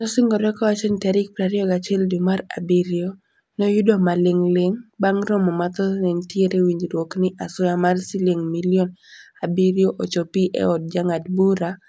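No technical faults can be heard anywhere in the speech.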